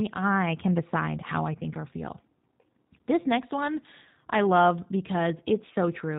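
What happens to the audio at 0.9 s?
At 0.9 s the speech carries G.729 codec damage, which runs through the whole clip rather than starting at that moment. The codec rebuilds each 10 ms frame from a vocal tract filter, a pitch predictor and a sparse set of pulses, and nothing above 4 kHz survives. The result here is plainly audible: a dull, band-limited, slightly rough and synthetic quality that fits an 8 kbit/s G.729A stream.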